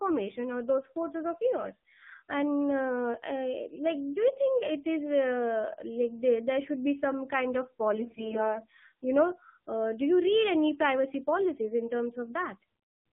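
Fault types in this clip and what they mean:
AMR narrowband mobile codec: The speech passed through a 2G/3G mobile speech codec that rebuilds the voice from a vocal-tract model and sparse pulses. Only about 150 Hz to 3.5 kHz survives, and the plainly buzzy, synthetic texture points to a low rate, around 7 kbps.
AMR bit errors: Over a weak link, the less protected bits in a run of codec frames arrived flipped, roughly several percent of them, so pulses and fine parameters decoded wrongly. From 7.94 to 8.61 s, between "be some kind of" and "you know uh do", the speech turns hoarse, scratchy and gargly.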